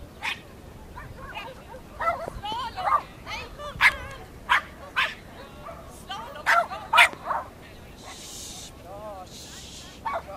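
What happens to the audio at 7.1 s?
At 7.13 to 7.15 s there's a single loud pop, a sharp spike sitting roughly 10 dB above the surrounding sound for about 20 ms. It's likely a voltage glitch, say a switch, static or a driver hiccup, while the audio carries on beneath it.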